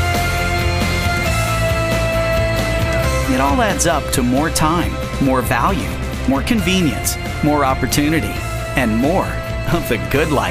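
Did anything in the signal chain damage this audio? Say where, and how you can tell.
Yes. Mains hum enters in the analogue wiring: a steady 60 Hz tone with low harmonics runs under the sound for the whole clip, only around 10 dB below it. A ground loop or nearby transformer is coupling the power line into the signal path.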